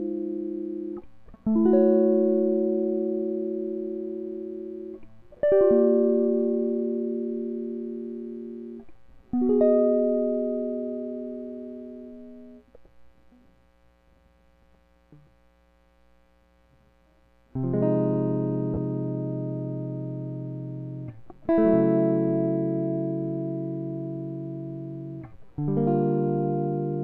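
At 18.74 to 18.77 s, lost LE Audio frames: a 30 ms gap, consistent with three 10 ms frames, where the decoder repeats the last spectrum with randomised signs, smearing the music into a brief noisy blur.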